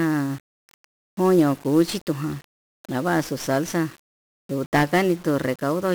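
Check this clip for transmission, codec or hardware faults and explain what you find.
There's one problem here, and it runs the whole length of the speech: 1-bit DFPWM compression. The codec keeps a single bit per sample and uses it to push an adaptive level up or down, so the waveform is only ever a coarse staircase chasing the real signal. That leaves heavy broadband quantisation noise. You hear it as a fuzzy, crackly layer with the top end smothered in hiss, which fits a 1-bit stream at about 48 kbps.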